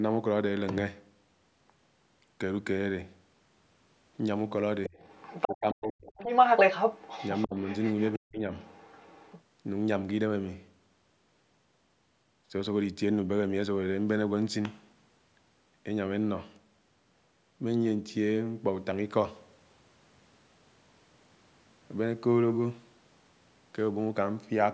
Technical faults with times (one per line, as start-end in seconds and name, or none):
4.84-5.56 other side's voice leaking through
4.88-4.97 speech suppressed in double talk
5.45-6.13 speech suppressed in double talk
6.18-8.12 other side's voice leaking through
7.47-7.55 speech suppressed in double talk
8.17-8.47 speech suppressed in double talk
8.59-9.42 other side's voice leaking through